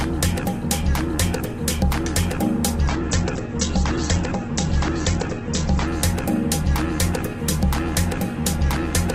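A call bitrate drop runs from 2.9 to 5.97 s. The encoder was starved of bits, consistent with a fall from around 48 to 10 kbps, so it coded coarsely and cut bandwidth from 20 kHz to 8 kHz. The sound turns rough, watery and muffled for about 3 s before recovering.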